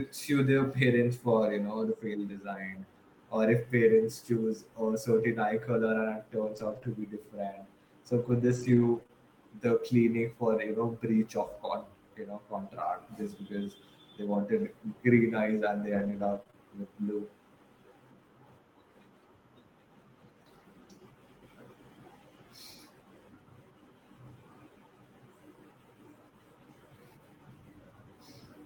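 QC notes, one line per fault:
6.43–9.11 s, scattered short gaps: roughly three brief dropouts spread over this stretch, each patched by the receiver extending the preceding sound. The filled holes total around 50 ms, the longest only about 20 ms, so concealment covers a small share of the span. The speech stays mostly clear between the patches, which fits isolated packets arriving late or not at all.
15.95–16.55 s, repeated packet loss (robotic sound): just after "eyes and they", three gaps land in close succession, 60 ms of audio missing in all, the longest 24 ms. Each is concealed by continuing the last sound, and the next loss follows before the decoder recovers, so about a tenth of this 0.6 s span is synthesized. The stacked repairs give a choppy quality with fragments dropped.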